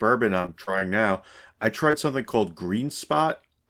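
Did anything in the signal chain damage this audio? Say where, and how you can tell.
Yes, the network stage. From 0.41 to 0.83 s there is repeated packet loss (robotic sound): four gaps, the longest 32 ms, together about a quarter of that span. Each hole is bridged by repeating the preceding waveform, so the spectrogram shows smeared, frozen harmonic bands and the waveform shows short looped stretches.

A single short concealed packet loss sits at 1.91 to 1.95 s, a 20 ms hole filled by extrapolating the last sound and then blending back in. It is heard as a brief smear. On the waveform it is one compact patched stretch with a soft seam on either side.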